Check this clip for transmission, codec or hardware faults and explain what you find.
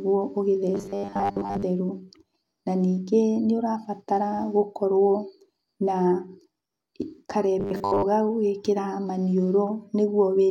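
Two stretches of robotic sound from repeated short buffers turn up in this speech, at 0.75 to 1.63 s and 7.60 to 8.03 s. The likely cause is audio arriving too seldom, so playback keeps replaying its last short chunk, about 10 ms judging by the pitch, and skips most of the real signal. That loop forces a steady 100 Hz buzz onto the voice, giving a rigid, metallic drone that only loosely tracks the speech.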